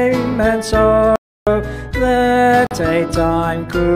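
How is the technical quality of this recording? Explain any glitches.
The recording has two gaps where sound is lost.

From 1.16 to 1.47 s there is an audio dropout to silence: about 0.31 s of silence with no room tone, likely from a lost input while recording continued.

From 2.67 to 2.75 s comes a digital broadcast dropout. This much shorter 43 ms hole fits a single lost frame that the receiver muted, unlike the longer, input-side cut before it.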